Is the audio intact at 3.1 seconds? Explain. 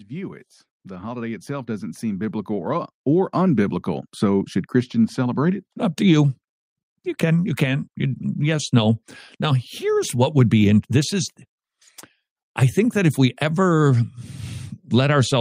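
No. At 3.1 seconds the clip is inside an automatic gain rising fault running from 0.07 to 4.15 s. The gain control judged the input too quiet and kept pushing its gain up, by about 16 dB overall, so the voice and the background noise swell together.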